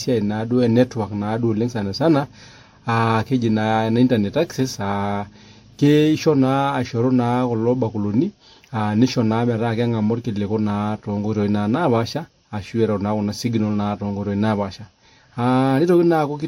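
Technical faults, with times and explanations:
Throughout: transcoding between lossy codecs. The speech carries two layers of different codec artefacts heard together, pointing to an MP3 pass at around 53 kbit/s likely re-encoded to WMA near 96 kbit/s. The top stays cut off above 16.5 kHz despite the higher later rate, unlike single-codec compression.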